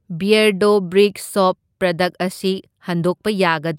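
The speech recording has no audible technical fault, and the signal stays steady and intact throughout.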